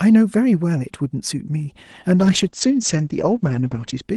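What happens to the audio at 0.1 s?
Nothing goes wrong at 0.1 s: the speech there is intact, carried cleanly through the call path with no dropout, glitch or other fault at that moment.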